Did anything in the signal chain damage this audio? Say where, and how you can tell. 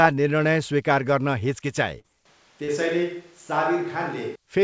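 Yes. Short concealed packet loss hits the network and jitter-buffer stage three times: 1.60 to 1.64 s, 2.00 to 2.06 s, and 2.64 to 2.70 s. Each gap is roughly 20 to 40 ms of audio that arrived too late to decode. The receiver covered it by extending the preceding sound and then crossfading back. You hear each one as a brief smear or wobble in the speech rather than a clean dropout.

A switch to a distant microphone runs from 2.26 to 4.35 s, at the capture stage. The speech abruptly turns roomy and hollow, with thinner low end, and its level falls by about 5 dB. Room noise rises to roughly 35 dB below the speech. At 4.35 s the close sound returns just as suddenly. The likely cause is that the close microphone's feed dropped out and a farther pickup, such as a camera mic, took over. Throughout the clip, the call codec's band limit at 8 kHz fits G.722 running at 64 kbps.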